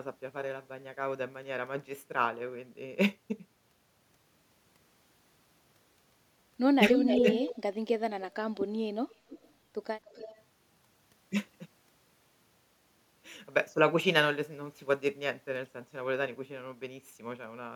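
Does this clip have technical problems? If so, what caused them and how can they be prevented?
Yes. A delayed copy of the speech, trailing by about 0.29 s, is heard from 6.93 to 7.55 s at roughly the same loudness as the speech itself, then more faintly from 9.09 to 9.53 s and 10.09 to 10.41 s. This is an echo leak, likely from the far end's loudspeaker feeding its microphone past an echo canceller that failed to remove it. A headset there, or a better-converged canceller, would prevent it.

The speech also ducks briefly, by around 15 dB, from 7.14 to 7.27 s and from 7.48 to 7.57 s, overlapping the loudest echo. This is speech suppressed in double talk, likely the canceller mistaking the speech for echo while both signals were present and attenuating everything. Double-talk-aware echo cancellation or headsets would prevent it.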